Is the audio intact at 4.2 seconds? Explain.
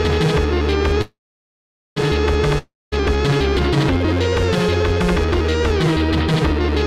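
Yes, the audio is intact at 4.2 seconds, with no dropout, glitch or other fault at that moment.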